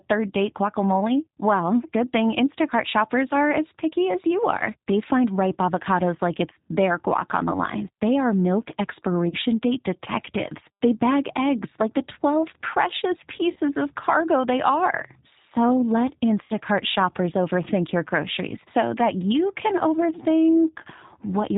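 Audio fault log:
throughout G.729 codec: plainly rough, slightly synthetic speech with nothing above 4 kHz, typical of a low-rate model-based codec consistent with 8 kbit/s G.729A.
9.29–9.36, 13.53–13.59, 16.44–16.53 VoIP packet loss concealed by the speech codec: brief buzzy, fading smears where the decoder stretched its last pitch and filter to bridge gaps of about 30 ms, 30 ms and 60 ms.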